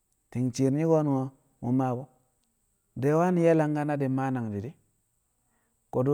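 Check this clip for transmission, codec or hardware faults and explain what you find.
No faults can be heard anywhere in this recording.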